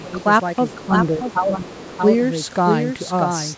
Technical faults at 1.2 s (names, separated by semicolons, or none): doubled audio track; other side's voice leaking through